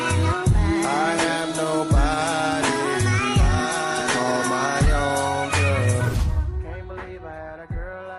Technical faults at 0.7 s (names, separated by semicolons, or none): none